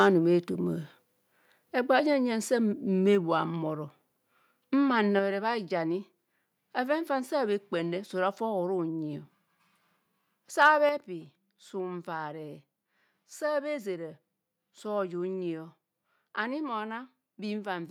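Speech with harsh, crackling flat-topped peaks from 0.00 to 0.07 s and again from 10.61 to 10.69 s, likely microphone overload driving the converter about 3 dB past its limit; the distortion rides only the loudest moments, unlike steady codec grit. At 10.89 s voice and background drop together by 6 dB in one abrupt step rather than a gradual fade, likely the microphone volume stepped down by the call software after that distorted peak.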